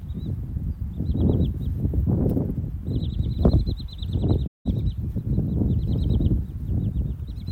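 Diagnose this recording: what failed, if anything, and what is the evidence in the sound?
The codec stage failed here, with AAC frame loss with muting. At 4.46 s the sound fades away into a gap and comes back in at 4.67 s, leaving roughly 0.19 s missing. That hole fits about nine AAC frames being lost. The decoder had nothing for those frames, so it zeroed their spectrum. Overlap-add across the neighbouring windows then ramps the sound down into the gap and back up out of it, giving the gap soft edges rather than a hard cut.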